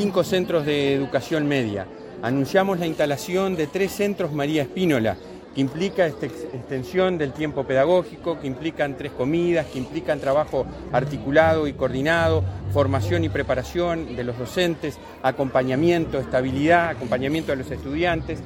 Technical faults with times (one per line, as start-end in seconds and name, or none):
none